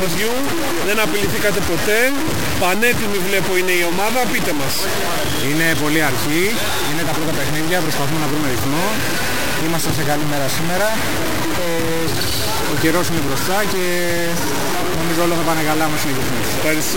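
From start to finish the audio carries heavy, grainy distortion that rises and falls with the sound itself, with an error level roughly as loud as the wanted signal. This is likely low bit depth without dither: the signal appears to have been truncated to around 3 bits, leaving only a handful of amplitude steps. Because no dither was applied, the error tracks the waveform, so quieter passages turn coarse and sputtering rather than carrying a steady noise floor.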